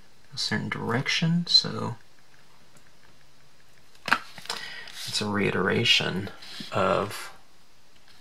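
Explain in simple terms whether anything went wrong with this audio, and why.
Nothing went wrong here: the audio shows no audible technical faults anywhere in the clip.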